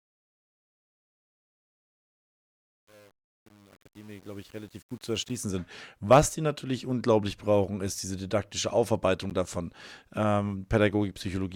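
A volume ramp processed at only 8 bits without dither causes truncation distortion on the fade-in from 0.0 s to 5.42 s. The quietest opening stretch is worst: the waveform collapses into coarse steps, so the sound starts out gritty as the fade rises.

At 5.29 s and 9.30 s, mismatched timestamps between stream segments leave gaps of 9.6 ms and 11.8 ms, which fits 2-second segments. Each gap between stream segments is filled with silence, a brief hard-edged hole in the speech. The second falls just after "brauchen ist diese didaktische".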